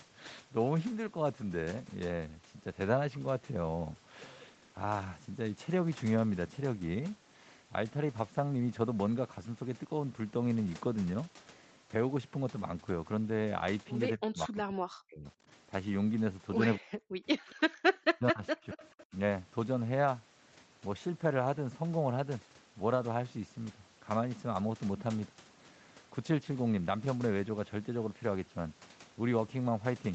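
From 14.16 to 15.25 s, and again from 16.77 to 17.41 s, the speech sinks by as much as about 40 dB, which is most likely speech suppressed in double talk: the echo canceller couldn't separate this talker from the far side, so it ducked everything. Further dips follow at 17.61–17.68, 17.89–18.43, 18.64–18.81 and 19.1 s.

Tucked into that stretch, at 17.49–17.55 s and 18.64–19.06 s, there's a faint copy of the voice played over the loudspeaker trailing by 232 ms, about 25 to 30 dB down. That's likely an echo leak, with loudspeaker pickup slipping past the canceller and coming back.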